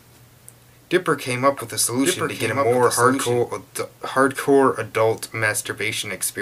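From the start to 3.38 s, a doubled audio track: a clean copy trails about a second behind, somewhat quieter, then cuts off abruptly, likely from a second, slower capture path.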